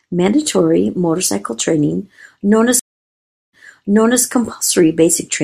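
Right after "motorcycle training known as", at 2.79 s, there's a stream reconnect. The connection drops and the audio goes dead for about 0.74 s. A fresh decoder then picks up roughly 0.7 s earlier, so you hear a stretch repeated before it settles by 4.23 s.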